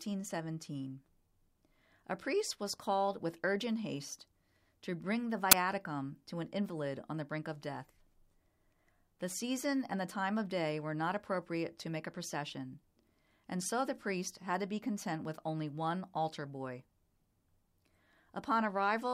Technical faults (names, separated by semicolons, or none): uninitialised buffer